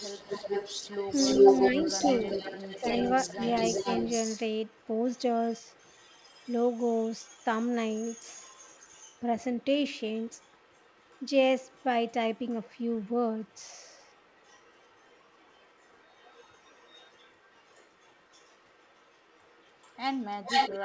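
Echo leak runs from 0.0 to 9.23 s: a copy of the speech returns about 0.4 s late, nearly as loud as the original, likely because the far end's echo canceller let loudspeaker sound its microphone picked up pass back into the call.

Speech suppressed in double talk occurs at 2.8 s (a slight dip) and from 3.33 to 3.41 s (a much deeper cut). The level briefly drops while the echo overlaps, likely because the canceller could not separate the talker from the echo and turned both down.

Echo leak returns at 9.6 s, from 10.17 to 11.31 s, from 11.62 to 13.08 s, and from 13.41 s to the end. The delay stays near 0.41 to 0.43 s, but the copy is now faint, a quiet trailing ghost that grows slightly stronger after 13.4 s. It likely has the same cause, with the canceller suppressing more. The call path's band limit at 8 kHz, which fits a G.722 wideband call, shapes both the speech and its echo.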